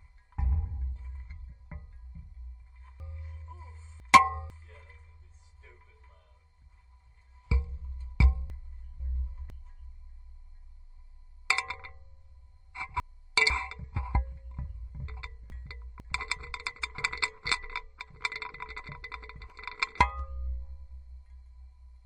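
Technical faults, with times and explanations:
3.0–4.5 s, 8.5–9.5 s, 11.5–13.5 s, 15.0–16.0 s, 18.0–20.0 s: chunks out of order. In each span a 500 ms chunk plays one to three chunks late, after audio that should follow it, so the passage sounds jumbled, with three hard joins.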